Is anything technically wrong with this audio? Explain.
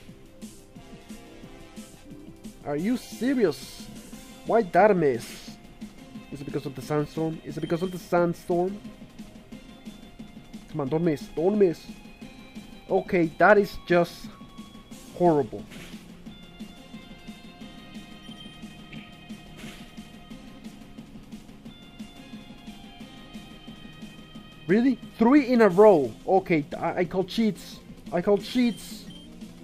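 No, no technical faults here.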